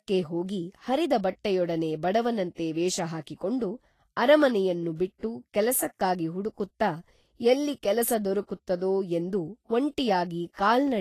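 Speech throughout, and the whole clip carries plainly audible Vorbis compression damage. Nothing comes through above about 14.1 kHz, and the treble that's left sounds hissy and grainy, with consonant attacks smeared. That's likely a low-quality Vorbis encode, somewhere around 33 kbps, where the encoder quantises the high band so coarsely that fine detail gets swapped for noise of similar energy.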